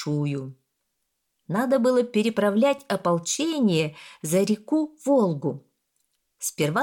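Nothing in the audio stood out as a technical problem on listening.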